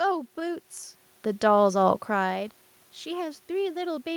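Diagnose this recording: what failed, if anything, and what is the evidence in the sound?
Nothing in the chain has failed here: the background noise is just the room the microphone sits in, and the level shifts around half a second and again near two seconds are the talker moving relative to the mic rather than anything the system did.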